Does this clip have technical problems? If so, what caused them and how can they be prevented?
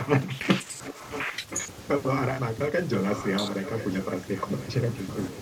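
Yes. From 0.55 to 1.24 s, 1.5 to 1.63 s, 2.92 to 3.29 s and 3.45 to 4.68 s, a faint repeat of the speech trails about 1.02 s behind, roughly 10 dB down and nearer 15 dB in the last stretch. This echo leak likely comes from a far-end loudspeaker whose echo canceller let its microphone pickup through. Using headsets or a better-tuned echo canceller would prevent it.

Around 0.64 to 0.68 s the speech briefly dips by a few decibels for about 40 ms, while the echo is also present. This is speech suppressed in double talk: the canceller, likely unable to tell the talker from the returning echo, pulled both down. Better double-talk detection or less aggressive suppression would prevent it.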